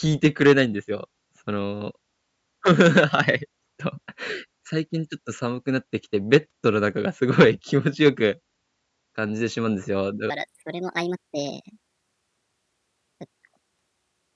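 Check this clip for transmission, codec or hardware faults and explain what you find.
One fault, a wrong sample rate. From 10.3 s to the end, the speech turns high and hurried, about 1.38 times faster and 5.55 semitones up, which fits 16 kHz audio played back at 22 kHz without conversion.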